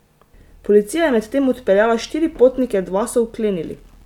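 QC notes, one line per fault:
No technical fault is audible anywhere in the signal.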